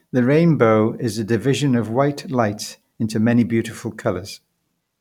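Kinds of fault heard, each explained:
No technical fault can be heard anywhere in this speech recording, and the signal holds steady throughout.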